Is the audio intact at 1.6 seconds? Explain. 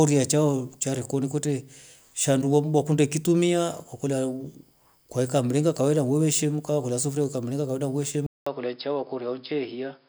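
Yes, the speech at 1.6 seconds plays through intact, with no dropout, click or other fault at that moment.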